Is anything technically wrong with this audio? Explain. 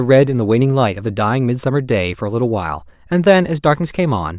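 No, nothing is technically wrong with this audio.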